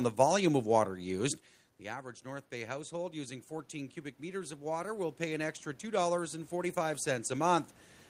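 Speech, with automatic gain rising from 1.8 s to about 7.7 s. After the input level fell by about 16 dB, following the talker moving away from the microphone around a second in, the gain control treated the signal as too quiet and slowly added about 12 dB of gain. The voice creeps back up in loudness over those six seconds, and the room noise swells along with it, so the background grows louder throughout.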